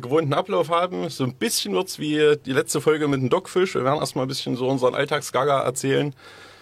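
No technical faults can be heard anywhere in the audio.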